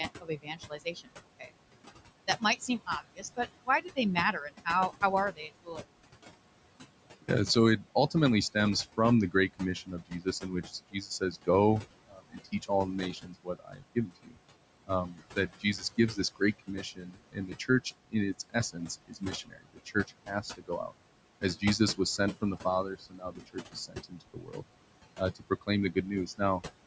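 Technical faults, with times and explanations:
Throughout, noise suppressor artifacts: the room noise, sitting about 13 dB under the speech, gets pulled down about 21 dB between phrases, so it pumps.
0.21–1.52 s, 2.27–5.83 s (ending just before "evangelization for us"), 7.22–24.63 s (starting right after it) and 25.18–26.62 s, speech cut by the noise suppressor: quiet consonants and word endings get mistaken for noise and dropped by about 16 to 22 dB, so they sound swallowed. That adds up to roughly a second, most of a second, about five seconds and a brief moment.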